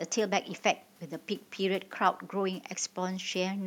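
No technical faults can be heard in this speech recording. The room's own background noise sits about 35 dB below the speech and belongs to the recording itself.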